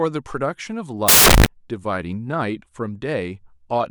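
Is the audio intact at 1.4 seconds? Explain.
No. From 1.08 to 1.46 s the speech gives way to loud, harsh broadband noise from samples built from the wrong bytes: each sample's bytes are misassembled, so the rapidly changing low-order bits end up dominating every value.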